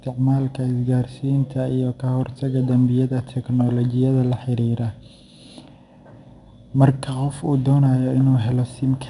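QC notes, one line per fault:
Throughout, 4-bit ADPCM compression: a gritty hiss sits on every louder stretch of the speech and rises and falls with its level, with roughness on the sharper consonant attacks. Nothing is left above 10.6 kHz, so the top end is dulled. Each sample is stored as a coarse 4-bit step from a prediction, and the adaptive step size lags behind fast attacks. The damage is plainly audible and fits a bitrate of about 89 kbps.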